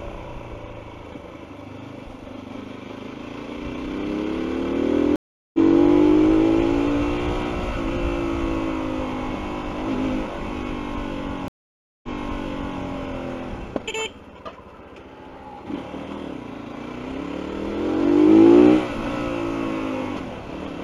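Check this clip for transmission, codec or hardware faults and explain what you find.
Two stream reconnects interrupt the audio. At 5.16 to 5.59 s, the connection dropped and the player restarted its decoder mid-stream. The result is 0.38 s of silence, after which the sound resumes roughly 0.3 s further on, so a short stretch is skipped. At 11.48 to 12.82 s, a second break gives 0.55 s of silence. The server then resent a burst, so playback restarts 0.79 s earlier and that passage is heard twice. Each restart begins with the fresh decoder's first frame fading in.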